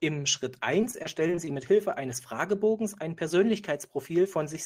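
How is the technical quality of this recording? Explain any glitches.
The recording has one glitch. From 0.81 to 1.49 s there's repeated packet loss with a robotic sound. Audio went missing in several short holes, the longest about 23 ms, and each was patched by stretching the preceding sound, about 17% of that span. That gives the speech a choppy, robotic edge.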